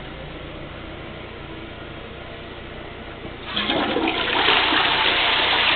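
Nothing in this audio stands out as a technical problem; it just runs along without anything going wrong that a listener would notice.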